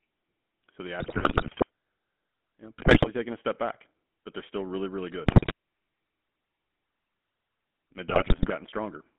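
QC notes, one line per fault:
throughout, GSM full-rate codec: steady buzzy, gravelly roughness from regular-pulse excitation, with the band held between about 200 Hz and 3.4 kHz, consistent with a 13 kbit/s full-rate stream. It is constant rather than bursty, which separates it from the link errors below.
1.0–1.65 s, 2.78–3.08 s (after "you know", before "taken a step back"), 5.26–5.53 s (after "still really really good"), 8.08–8.51 s, GSM bit errors: corrupted filter, pitch and gain values produce squawks, pops and gargling, worst at 5.26 s. The sound is garbled rather than silenced or repeated, which rules out dropped frames.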